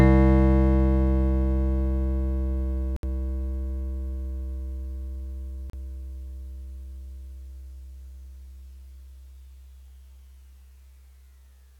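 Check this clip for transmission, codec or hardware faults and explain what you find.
Two brief dropouts interrupt the music, and both sound like a Bluetooth stall. The first runs from 2.96 to 3.03 s, a gap of 68 ms. The second runs from 5.70 to 5.73 s, lasting 35 ms. Each time the music cuts cleanly to silence, then resumes. The likely cause is radio interference delaying packets on the wireless link. The headphones' buffer empties, so playback halts until the resent packets arrive.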